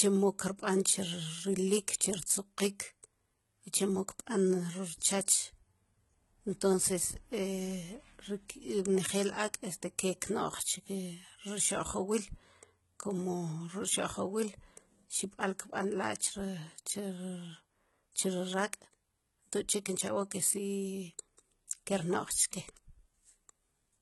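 Throughout the speech, the treble sounds synthetic. S sounds turn gritty and lispy, with a metallic edge. Nothing reaches above 11.8 kHz. This is likely HE-AAC compression, heavily damaged, fitting about 16 kbps. The treble is rebuilt from copied lower bands.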